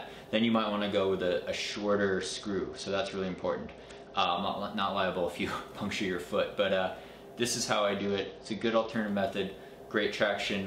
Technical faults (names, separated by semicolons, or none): Bluetooth SBC bit pool drop